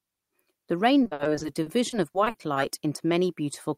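From 1.03 to 2.58 s the speech turns choppy and robotic: repeated packet loss, with thirteen gaps up to 60 ms patched by extending the preceding sound.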